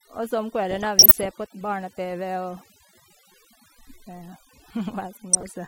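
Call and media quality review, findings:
Mains buzz, whole clip: steady raspy 60 Hz buzz sitting around 25 dB under the speech. Harmonics climb well up into the kHz range. Probably a dimmer, rectifier or unshielded run spiking twice per mains cycle into the chain.

Overdone noise removal, whole clip: the denoiser is cranked too hard. Background drops and breaks up into twinkly specks. Bands near the noise estimate get gated off along with the quieter speech detail.

DAB burbling at 0.71–1.29 s, right after "og så om", and again at 5.33–5.48 s: burbling noise blips. This looks like weak DAB reception letting bit errors through into the MP2 frames, so short noise blips land in individual sub-bands.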